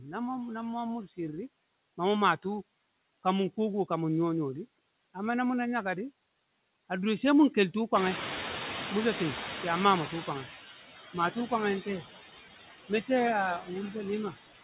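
From the first second there are noise suppressor artifacts. The suppressor pulls the steady background down by about 15 dB, frame by frame, so the noise dips away in the gaps and swells back under the talker. All of this sits inside a narrow call band with nothing above 4 kHz, which fits plain G.711 mu-law at 64 kbps.

Around 8 s the room noise jumps sharply, by roughly 18 dB, and that's where the noise suppressor catching up shows. From 7.94 to 10.53 s the louder noise comes through with less reduction than before, because the suppressor's noise estimate is still tuned to the quieter room. Over those 2.59 s it gradually works out the new level, and the noise sinks until it's being cut by about 11 dB.

Near the end there are two short bits of speech cut by the noise suppressor. From 12.89 to 13.09 s, and again from 13.59 to 13.70 s, the suppressor mistakes part of the speech for background and turns it down with the noise, by about 14 dB and then about 12 dB. 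Each costs something like a tenth of a second, and those fragments sound swallowed and faint.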